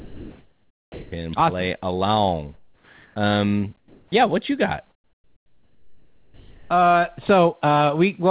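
From 0 to 1.12 s the background is comfort noise in place of the background: a steady, featureless hiss about 3 dB quieter than the real room sound, sitting about 41 dB below the loudest speech. The likely cause is discontinuous transmission, with the sender going silent and the receiver synthesising noise shaped only roughly like the background. On a spectrogram the band looks smooth and uniform, lacking the fine texture of real ambience, and because the call path stops at 4 kHz the hiss has nothing above that. At 1.05 s, 70 ms before speech resumes, the onset is clipped by the voice detector, likely because it reacted late and the first moments were never sent. The sound starts abruptly with no soft rise, and the waveform jumps straight from flat noise into the speech.

Between 2.54 and 3.16 s comfort noise replaces the background again, about 2 dB quieter and about 38 dB below peak. 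From 3.78 to 4.12 s the substitution is deeper at about 6 dB quieter, a dip in the noise floor on the waveform. Its final 40 ms, from 4.08 s, is another clipped onset, so "what you got" begins with a hard edge. After "what you got", from 4.9 to 6.7 s, comfort noise fills the gap about 1 dB louder than the real background. It is a flat, unchanging band on the spectrogram.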